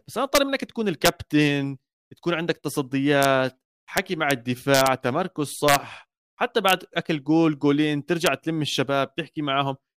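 Integer overflow cracks the speech at 0.35–0.38, 1.05–1.08, 3.23–3.25, 3.97–4.31, 4.74–4.87, 5.68–5.76, 6.69–6.73 and 8.26 s. Peaks reach up to about 4 dB past the limit. They wrap to the opposite sign instead of being held. Each one is a violent crack, sharper than clipping.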